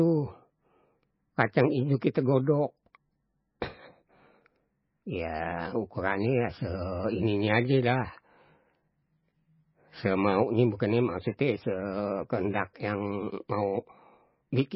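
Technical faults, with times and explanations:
Throughout, MP3 compression: the speech has nothing above about 5.5 kHz, so the s sounds lose their bite and the top end stops dead at a fixed edge. Weak frequency lines drop in and out from frame to frame, giving a watery, swirling quality, and consonant onsets smear. The damage is heavy, which fits a bitrate near 17 kbps and likely points to an MP3 encoder. The shifting swirl separates it from a plain low-pass filter, which would only dull the sound.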